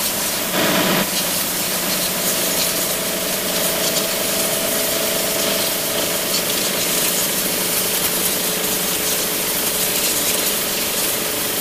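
Low bit depth with dither runs throughout: the audio is quantised to just 4 bits with dither, turning rounding error into a steady, even hiss almost as loud as the sound itself.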